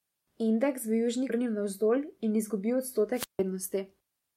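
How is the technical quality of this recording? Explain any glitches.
The recording has three distinct glitches.

At 1.29 s, a skip ahead occurs: roughly 0.7 s of speech was discarded in transit or by the jitter buffer, so playback jumps forward with no gap.

From 1.39 to 2.40 s, a jitter buffer speed-up trims pitch-period slices, about a tenth of a second in total, running the speech at 108% with unchanged pitch, so it sounds slightly hurried.

From 3.14 to 3.39 s, a wireless microphone squelch dropout occurs: the FM signal fades, hiss rises, and squelch mutes the output for about 153 ms before the speech returns.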